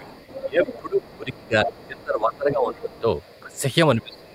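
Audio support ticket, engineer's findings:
Speech suppressed in double talk, three spots. 0.0 to 3.08 s: talker dips and drops out in pieces, roughly 2 s lost in total, deepest dip near 20 dB down. 3.43 to 3.63 s: brief duck, around 15 dB. 3.96 s to the end: deepest hit, about 25 dB. Likely the echo canceller can't separate near talk from loudspeaker echo and ducks both.

Other side's voice leaking through, four spots. 0.13 to 1.36 s: far voice under the talker, about 15 dB below. 1.67 to 1.87 s: short burst, loudest, about 10 dB down. 2.96 to 3.6 s: faint, around 35 dB below. 4.13 to 4.21 s: quick scrap, about 30 dB down. Likely residual loudspeaker echo the canceller failed to remove from the mic.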